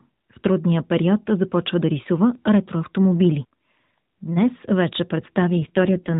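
From 5.57 to 6.15 s, an AMR rate drop: the mobile codec falls back to a lower mode, apparently from 12.2 to about 5.9 kbps, so the speech turns rougher and more synthetic within the unchanged narrowband.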